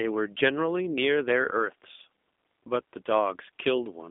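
G.729 coding throughout the clip: the speech is rebuilt from a vocal tract filter, a pitch predictor and a few pulses per 10 ms frame, at a rate consistent with 8 kbit/s. Plainly audible roughness and a synthetic edge result, in a narrow band of 150 Hz to 3.6 kHz, with the faint room noise, about 48 dB down, warbling.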